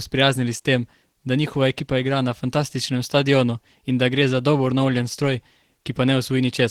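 From start to finish the speech carries plainly audible Opus compression artefacts, likely from an encode at a low rate around 16 kbps. The character points to the codec's hybrid mode, where the lower band is coded as speech and the upper band is coded by the music mode. The result is a hoarse, muffled quality with grainy texture in the highs. Bandwidth stays full, extending to about 20.2 kHz.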